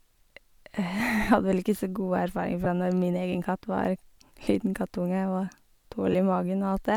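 A short speech clip with lost LE Audio frames in three places: at 1.00 s, just before "vel ikke så gode" (one 7.5 ms frame); at 2.64–2.66 s, right after "ikke så gode erfaring"; and at 6.12–6.15 s, each of the latter two losing 15 ms. The LC3 decoder patches each gap by replaying the previous spectrum with scrambled signs, giving a brief grainy smear rather than the hard silence or sharp click of a plain dropout. The light lossy compression on the rest isn't a fault.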